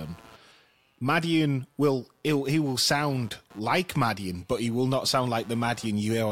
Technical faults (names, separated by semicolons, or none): computer activity noise